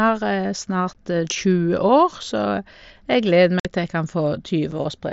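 Unconcealed Bluetooth headset packet loss cuts abrupt silent holes into the speech at 0.93 s, from 3.60 to 3.65 s, and at 4.71 s. The gaps last 15, 52.5 and 7.5 ms, which fits lost 7.5 ms packets. Unlike concealed loss, nothing fills them.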